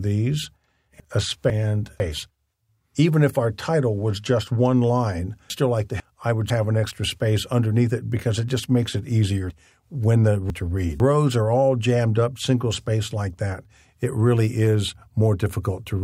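At 1.0 to 2.0 s the audio has chunks out of order. A 500 ms chunk arrives one chunk late and plays after the piece that should follow it. Nothing is missing, but the sequence jumps, with hard joins. The same happens at 5.5 to 6.5 s. At 9.5 to 11.0 s a chunk arrives two chunks late. Each spot is heard as a jumbled, garbled moment.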